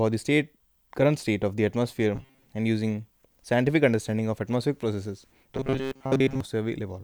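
Speech clip with robotic sound from repeated short buffers at 2.15–2.45 s and 5.55–6.41 s: a rigid 133 Hz buzz, likely from replaying a roughly 7.5 ms buffer while most incoming audio is skipped.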